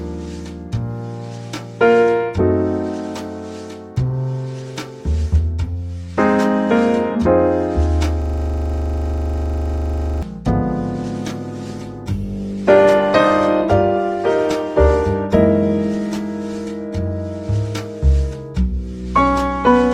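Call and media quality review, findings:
System hang loop, 8.22–10.23 s: steady buzz at 25 Hz; one 40 ms slice repeats about 50 times. Driver or host froze while the audio hardware kept replaying its ring buffer.

Adaptive stream at a lower bitrate, 11.22–17.22 s: sudden gapless quality drop, added codec artefacts, abrupt recovery. Network slowdown forced a lower-bitrate rendition, consistent with Opus dropping from 64 to 24 kbit/s.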